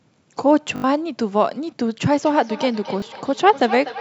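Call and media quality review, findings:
Repeated buffer at 0.76–0.84 s and 3.00–3.02 s. Short stutter with hard joins. Playout underrun; the last block replays, consistent with a 20 ms buffer. First event repeats four times.

Feedback echo between two devices, 2.13 s to end. Speech returns roughly every third of a second, about 13 dB down, thinning and ringing. A second device in the room is re-captured.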